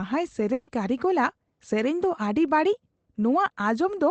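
At 0.53 s the speech breaks up in a burst of packet loss lasting until 0.69 s. About 140 ms of audio never reached the receiver in time, so the decoder covered the gap by extending the last sound it had and fading it down, heard as a smeared, held tone or hiss instead of silence. When playback resumes, that 140 ms of speech is simply gone, and the band-limited call-codec sound, topping out near 8 kHz, continues on either side.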